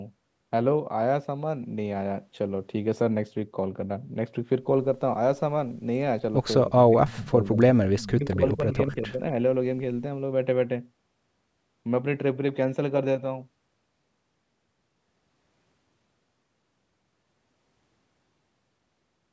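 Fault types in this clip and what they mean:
Speech suppressed in double talk: Between 6.64 and 7.6 s, and again between 8.09 and 9.37 s, the speech dips sharply. It falls by as much as about 25 dB, and under a second of each stretch is affected. The likely cause is an echo canceller pulling down both its own talker and the loudspeaker echo while both ends talked at once. On a waveform the envelope dips in patches; a spectrogram shows the energy abruptly thinned.
Echo leak: Faint, brief copies of the speech return 237 ms after the original, at 7.13, 7.99 and 8.31 s. Each lasts a quarter of a second or less and sits roughly 20 to 30 dB below the speech. They are likely loudspeaker pickup that the far end's echo canceller did not fully remove and sent back. On a spectrogram they appear as weak repeats of patterns seen just before; on a waveform, as low ripples trailing louder sections.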